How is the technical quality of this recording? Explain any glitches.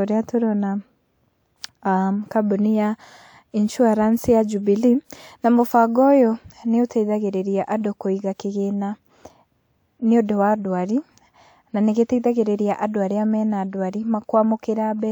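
No glitches turn up anywhere in this speech recording, so there's nothing here to explain.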